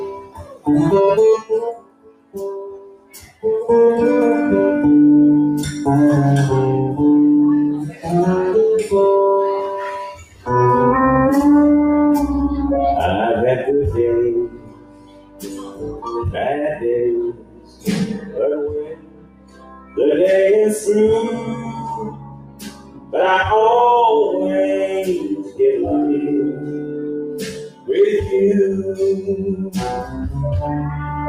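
A speech-tuned noise suppressor was left running on non-speech material, treating steady content as noise; levels swing by up to about 20 dB, so the sound pumps and thins.

The suppressor also turned sound down at 0.12–3.44 s, 7.89–8.06 s, 10.16–10.48 s, 14.46–19.98 s, 21.4–23.14 s, 25.22–25.6 s, 26.52–27.91 s and 29.62–30.29 s, with sustained sound sinking by about 11 to 17 dB and tails cut short.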